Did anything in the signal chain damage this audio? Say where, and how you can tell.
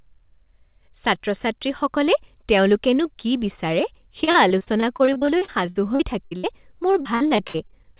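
Yes, the network stage. Repeated packet loss (robotic sound) runs from 4.24 to 6.45 s and again from 6.91 to 7.86 s. Short holes, the longest about 60 ms, come in quick succession, and each is patched by stretching the previous sound, so about a quarter to a third of each stretch is synthetic fill. That gives the choppy texture with pieces missing. Plain dropouts would leave silences instead. The call path's narrowband band limit at 4 kHz, which fits G.711 A-law, stays the same throughout.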